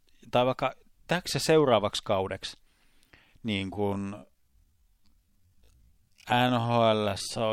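A speech clip with a time-stretched section that kicks in at about 3.7 s and runs right to the end. From there the pace suddenly drops to half speed, yet the pitch doesn't budge, so it drags rather than sounding deeper. That's most likely stretching software padding the audio out to fill a longer slot, holding the pitch steady by repeating short slices of sound over and over.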